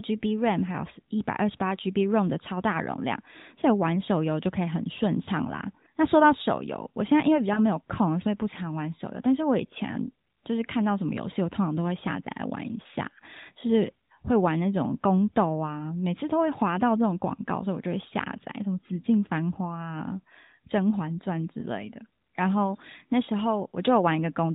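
At 5.24–5.29 s, 7.54–7.60 s and 23.70–23.74 s, lost AMR speech frames, each a single 20 ms frame, make the narrowband speech dip or warble briefly. They show as short, smeared, weakened bands on a spectrogram.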